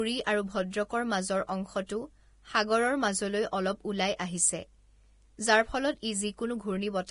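From start to finish the speech has a hissy, grainy treble with nothing above about 10.6 kHz, most likely from heavy Vorbis compression at a low setting, around 30 kbps. Fine high detail has turned into noise, so tones sound rough and attacks smeared.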